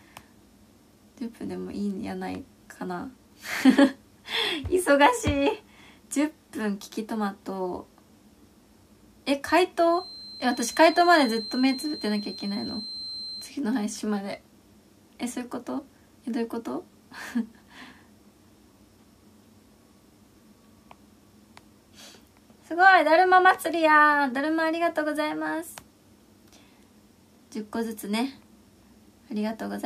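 A feedback whistle, a thin, steady tone near 4.1 kHz, sits about 15 dB below the sound from 9.83 to 13.55 s, swelling and fading slowly in level. It is likely a speaker-to-microphone loop held just short of runaway. Unlike full howl, it never builds.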